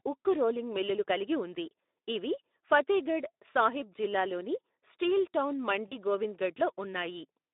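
Speex codec, throughout: the speech is squeezed through a narrow line band of roughly 250 Hz to 3.7 kHz, and the codec's scant excitation bits leave it plainly hoarse and noisy. The damage is consistent with a Speex bitrate of about 11 kbps.

VoIP packet loss concealed by the speech codec, 5.88 to 5.95 s, just after "సాహిబ్ జిల్లాలోని స్టీల్ టౌన్": about 40 ms of audio, consistent with two lost frames, goes missing. The decoder fills the gap by extending its last pitch and filter while the gain falls, producing a brief stretched sound that fades out.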